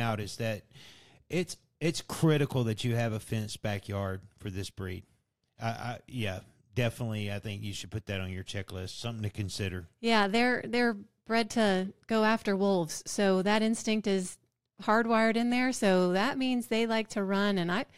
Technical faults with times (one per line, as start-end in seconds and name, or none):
none